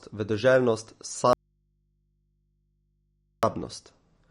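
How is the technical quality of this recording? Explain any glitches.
The recording has poor technical quality: low-bitrate coding artefacts run through the whole clip, and the speech drops out for about two seconds in the middle.

MP3 compression is audible from start to finish. There is no content above 10.6 kHz, which points to an encoder short of bits, consistent with a low rate of around 40 kbps. At that rate the encoder removes the treble above a fixed cut-off and discards weak spectral lines, and those lines flicker in and out from frame to frame. The speech therefore sounds dull and watery, with swirly, metallic edges on sibilants and softened consonant attacks. The likely cause is heavy MP3 encoding.

An audio dropout to a faint residue occurs from 1.33 s to 3.43 s, lasting about 2.1 s. The speech cuts off abruptly rather than pausing or fading, and what remains is a low mains hum sitting some 45 dB below the speech level. 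The break returns just as sharply. A hum-filled gap like this suggests the source was likely disconnected while the downstream input stayed live and picked up mains interference until the signal was restored.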